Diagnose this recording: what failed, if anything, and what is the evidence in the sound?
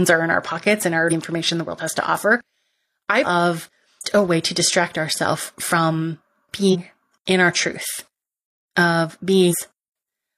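The codec stage failed: damaged data in the compressed stream gives brief disruptions at 1.07–1.13 s (after "in our pockets and"), 3.21–3.26, 4.00–4.05 (before "a way to"), 6.69–6.76 and 9.48–9.55 s. The decoder misreads corrupt frames and resynchronises. Spectrograms show short broadband smears, and waveforms show abrupt discontinuities.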